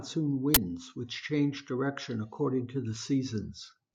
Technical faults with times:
0.54-0.57 uninitialised buffer

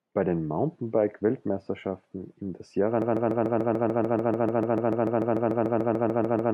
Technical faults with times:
3.02-6.53 broken-record loop

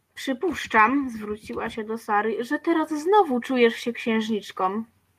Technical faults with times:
none

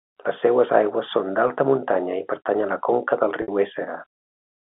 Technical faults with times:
1.48-1.50 packet loss with pitch repetition
3.42-3.48 packet loss with pitch repetition

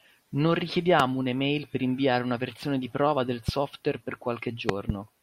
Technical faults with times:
1.00-1.02 loud pop
3.48-3.51 loud pop
4.69-4.92 loud pop

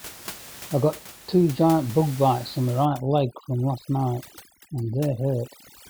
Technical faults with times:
2.85-5.90 overdone noise removal

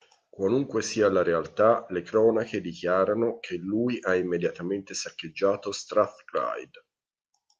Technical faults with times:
none

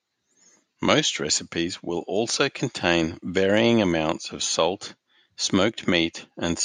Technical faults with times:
none

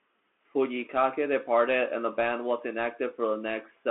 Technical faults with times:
0.00-3.90 Bluetooth CVSD headset codec

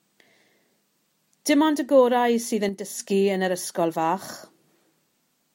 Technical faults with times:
2.69-3.00 one channel drops out

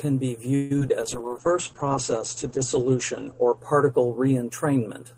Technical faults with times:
0.55-0.91 repeated packet loss (robotic sound)
1.02-4.89 call bitrate drop
1.22-1.48 jitter buffer slow-down

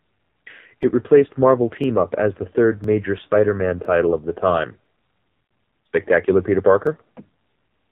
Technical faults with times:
0.00-7.91 AMR narrowband mobile codec
0.83 overlapping chunks
1.84 overlapping chunks
2.84 overlapping chunks
3.85 overlapping chunks
4.86 overlapping chunks
5.45-5.49 lost AMR speech frames
5.86 overlapping chunks
6.87 overlapping chunks

